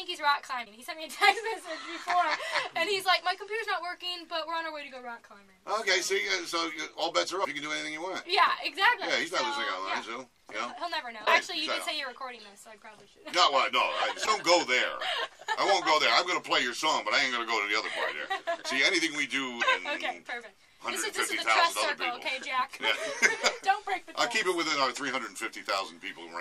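Short glitches break into the audio at 0.62, 7.43, 11.22, 14.23 and 19.58 s, each lasting about 30 to 56 ms. This is damaged data in a compressed stream: corrupted bytes make the decoder misread frames and lose sync until it finds the next frame header.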